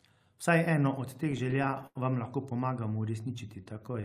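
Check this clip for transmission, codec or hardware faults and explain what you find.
Two network-related faults are audible in this speech.

Repeated stalls (stutter), 1.13 to 1.97 s, between "eno od" and "vam lahko": twelve buffer underruns are filled with continued sound, the longest 87 ms. Unlike a slow-down, the audio halts and restarts.

Jitter buffer slow-down, 2.80 to 4.02 s, after "vam lahko": repeated pitch periods add 119 ms, playing at 91% speed. The drag is smooth and steady rather than jerky.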